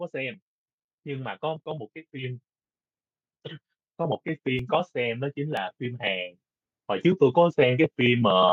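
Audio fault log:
1.66, 4.59, 5.57 and 7.53 s: audio missing between chunks. At each of these points the speech jumps forward a tiny bit, as if a sliver of sound, roughly a fiftieth of a second, just drops out and the two sides butt together with no gap. That's most likely a recorder handling the audio in one-second blocks and losing a little each time it hands over from one block to the next, so you get brief skips rather than silences.
3.97–6.35 s: automatic gain rising. Over these couple of seconds the level creeps up by about 4 dB, and the speech and the background noise come up together rather than the voice alone getting louder. That's the gain control deciding the input was too quiet and easing its gain upward gradually, so it reads as a slow swell, not a sudden jump. Two of the chunk skips land inside this rise.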